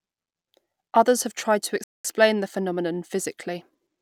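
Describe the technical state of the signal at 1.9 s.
At 1.9 s the player has likely run short of data or had its output thread blocked, causing a playback stall from 1.84 to 2.05 s. The speech cuts to silence for about 208 ms after "have tried to", then resumes with "the phenomenon".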